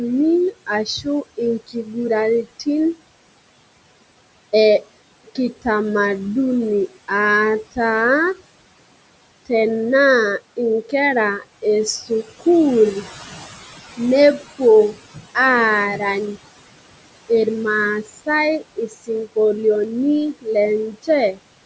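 Right from the start the noise suppressor artifacts are there: the room noise gets pulled down by about 21 dB between phrases and swells back under speech. Speech cut by the noise suppressor shows up at 0.51–2.67, 4.83–5.66, 10.39–12.43, 13.97–15.37, 18.03–19.37 and 20.33–21.39 s. The suppressor mistakes bits of speech for noise and dips them by about 13 to 21 dB, so soft consonants and word endings come out swallowed, a few hundred milliseconds at a time. At 19.84 s there's a bit error spike, a flipped bit across two samples, heard as one sharp, bright tick with no relation to the sound around it.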